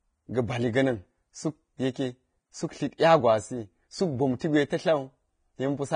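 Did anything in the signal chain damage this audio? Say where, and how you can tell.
Yes, at the codec stage. The whole speech clip has a hard ceiling with nothing above 9.7 kHz, and the treble that remains sounds hissy and grainy, with sibilants turned to coarse noise and a roughened edge on the voiced sounds. That's heavy codec damage, most likely Vorbis compression at a low bitrate, somewhere around 23 kbps. The encoder cuts the top band and quantises what's left so coarsely that fine detail becomes noise of roughly the same energy.

The same codec also causes pre-echo at 2.98 s and 4.39 s. Just before each sharp onset there's a brief smear of hiss, about 16 to 17 ms long, and the attack sounds soft instead of crisp. The transform codec spreads its quantisation noise across the whole block, so noise sized for the loud attack leaks into the quiet moment just before it.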